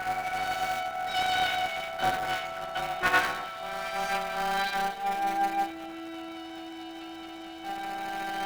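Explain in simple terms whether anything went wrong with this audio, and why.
Buffer tearing runs through the whole clip, heard as a steady robotic buzz at 200 Hz. The playback software and the sound hardware have fallen out of step, so roughly a tenth of each short chunk replays sound from a moment earlier, with hard joins.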